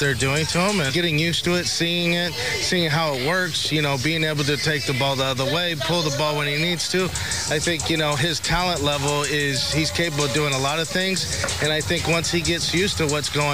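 Throughout, a harsh, buzzy grit rides on the audio, and pauses fill with noise around -40 dBFS instead of silence. That points to a likely stuck bit, one converter bit pinned so about half the samples shift. Unlike clipping, it persists at low levels.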